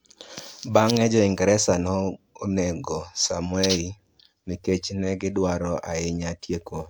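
No technical faults are audible anywhere in this speech.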